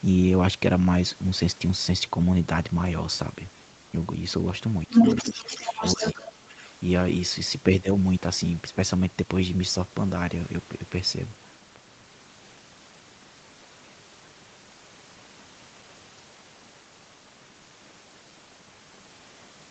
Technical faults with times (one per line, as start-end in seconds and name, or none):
4.87-4.93 speech suppressed in double talk
4.90-6.23 other side's voice leaking through
5.55-6.33 speech suppressed in double talk